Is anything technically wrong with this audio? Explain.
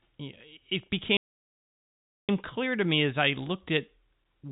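Yes. A playback stall runs from 1.17 s to 2.29 s, cutting the speech off mid-flow with about 1.1 s of dead silence before it picks up again. The likely cause is that the player ran short of data or its output thread was held up, so nothing reached the output until it recovered. The silence is complete rather than a fade, and it sits inside telephone-band audio with nothing above 4 kHz, as G.711 coding gives.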